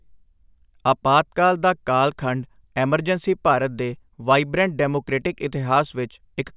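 Speech recording with no audible technical faults anywhere.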